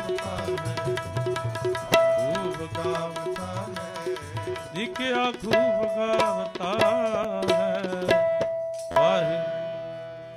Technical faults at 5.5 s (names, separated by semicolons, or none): none